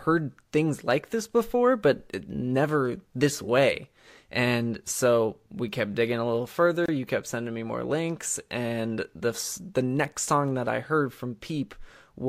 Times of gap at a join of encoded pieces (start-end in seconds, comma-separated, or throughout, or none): 6.86-6.88